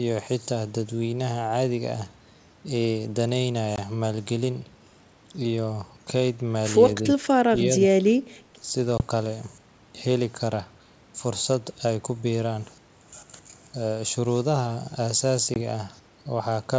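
At 3.76 s a hard-edged gap of roughly 20 ms opens, and the sound comes back with a touch of roughness that settles within some tens of milliseconds. This is packet loss on an ADPCM call. About one packet's worth of audio was dropped and filled with silence, so the receiving decoder's adaptive predictor and step size no longer matched the sender's until they recovered. The wideband sound, with nothing above 8 kHz, fits G.722 at 64 kbit/s.

Between 7.20 and 8.72 s the speech sags three times: a brief dip of around 10 dB at 7.20 to 7.27 s, a deeper loss of around 20 dB spread across 7.44 to 8.21 s, and another dip of around 10 dB at 8.61 to 8.72 s. This is speech suppressed in double talk, likely caused by an echo canceller that mistook the talker for loudspeaker echo while the far side spoke and turned the signal down.

The same packet loss on an ADPCM call recurs at 8.98 s and 15.54 s. Each is a clean 20 ms hole followed by a short, slightly distorted restart while the decoder catches up.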